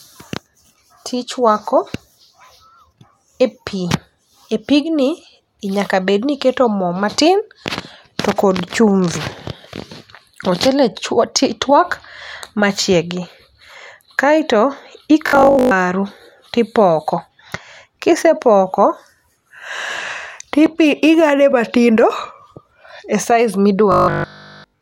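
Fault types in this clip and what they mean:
Robotic sound from repeated short buffers: the speech turns into a rigid, metallic buzz at 50 Hz from 15.27 to 15.71 s, where most of the sound is affected, and from 23.92 to 24.8 s, where it is replaced entirely. The likely cause is audio arriving too seldom, with playback looping the last block instead. A 50 Hz buzz fits a repeated block of about 20 ms, and the genuine audio in those spans is skipped.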